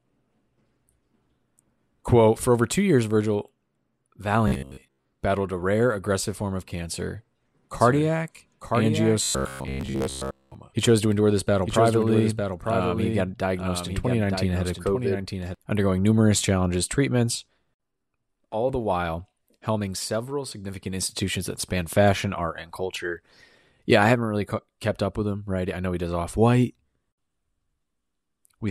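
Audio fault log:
4.48–5.05 s and 9.23–10.55 s, robotic sound from repeated short buffers: the speech turns into a rigid, metallic buzz pitched at 66.7 Hz that still loosely tracks the syllables, the first stretch ending just before "battled a rare aggressive". The likely cause is audio arriving too slowly, so playback keeps looping the most recent 15 ms slice, which imposes a 66.7 Hz periodicity. Most of the real audio in these spans is skipped rather than heard.
7.75–15.55 s, doubled audio track: a second full-band copy of the speech runs about a second behind and roughly 5 dB quieter, with no reverberant tail or room colouring. It cuts in abruptly after "aggressive form of cancer" and drops out just as suddenly before "undergoing numerous challenges treatments". This likely comes from the signal being picked up again through a slower path, or from an edit that left two offset copies layered together.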